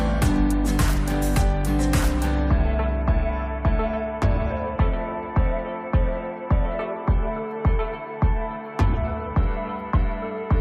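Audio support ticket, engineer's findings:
No audible defects found across the clip; signal path checks out, no action required.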